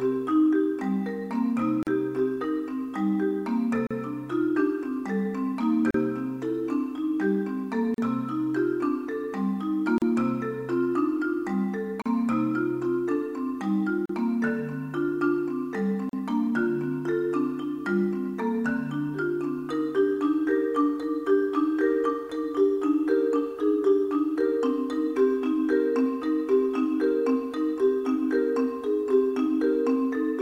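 Separately encoded pieces were joined without trimming each encoder's start delay and end padding, leaving a gap at a join of encoded pieces about every 2.0 s: silences of 38 to 40 ms, with smeared edges, at 1.83, 3.87, 5.91, 7.94, 9.98, 12.02, 14.06 and 16.09 s.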